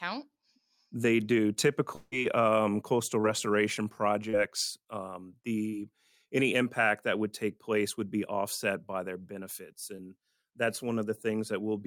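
Speech, with two kinds of fault. From 1.95 to 2.14 s, just before "um coastal", the last sound is stretched into a fading buzz for about 0.16 s, with no silence, and the speech resumes with that stretch missing. This is likely a long network dropout, where no audio arrived and the receiver kept extending what it had. Four short concealed packet losses follow, at 3.22 to 3.26 s, 4.30 to 4.35 s, 5.69 to 5.75 s (just before "any impact that would"), and 9.97 to 10.00 s (after "offset by their benefits"). Each lost 20 to 40 ms of audio. The receiver bridged each gap by continuing the previous sound, which is heard as a brief smear or wobble.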